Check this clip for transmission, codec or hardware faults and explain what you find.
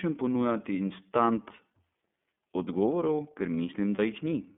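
Two faults are present: the whole recording has passed through the iLBC codec, and two short dropouts come from lost iLBC frames.

iLBC codec, throughout the speech: the signal was squeezed into a narrowband line running from about 200 Hz to 3.5 kHz and coded in standalone 30 ms blocks. The coding is plainly audible. The voice sounds thin and boxy, with a rough, slightly synthetic edge where the excitation is approximated. The texture fits iLBC's lower rate of around 13.33 kbps.

Lost iLBC frames, at 1.55–1.60 s just after "ponujati instant" and at 3.96–3.99 s just after "odgovorov ker": each gap spans about 30 ms of audio, which points to a single dropped packet. The decoder covered the hole by repeating the last pitch period blended with noise. This gives a brief held, faintly buzzy vowel in place of the real sound. Because every iLBC frame decodes independently, the voice snaps back cleanly at the next frame.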